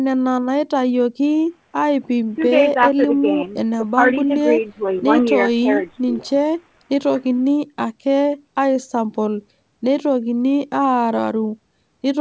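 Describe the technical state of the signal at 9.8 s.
At 9.8 s the speech is intact, with only the normal call-path bandwidth limit that leaves nothing above 8 kHz.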